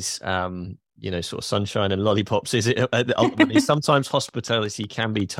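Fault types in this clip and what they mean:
Train of clicks: a steady series of near-identical clicks runs from about 2.82 s to the end of the speech at 5.39 s. They arrive at a regular pace of about 5.5 per second, roughly fifteen in all. Each one peaks at about the level of the speech itself. They tick over the talking and through the gaps alike. The likely cause is interference from nearby equipment or a faulty connection or power supply.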